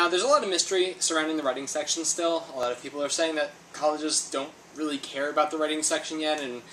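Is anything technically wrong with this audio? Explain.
Yes. There are two sharp clicks, at 1.43 s and 2.63 s, and they point to dropped samples. In each case a tiny slice of the stream, well under a millisecond, is likely missing. The waveform jumps abruptly to a later value, producing a single brief click that shows as a thin vertical line in the spectrum.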